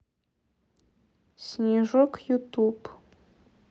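A speech clip with nothing technically wrong.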